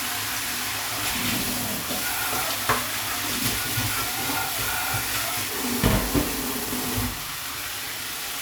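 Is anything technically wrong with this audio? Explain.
No, nothing in this audio points to a technical fault; the signal stays intact and steady throughout.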